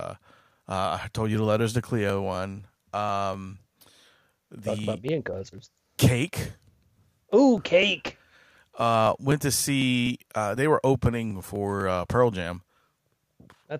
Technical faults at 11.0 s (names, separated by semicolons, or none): periodic USB or driver dropouts